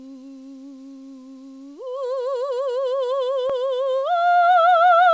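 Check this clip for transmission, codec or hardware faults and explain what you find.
Nothing here points to a transmission, codec or hardware problem: the music has come over a call link whose band stops at about 8 kHz, which is just how that path carries sound.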